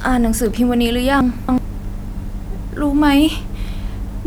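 A short speech recording has chunks out of order between 1.21 and 1.58 s. In that span, one chunk of about 93 ms plays three chunks late. It was written or delivered behind the chunks meant to follow it. No audio is missing, but the sequence is scrambled. The result is a brief jumbled, garbled moment. Three hard joins form where the misplaced chunk meets its neighbours.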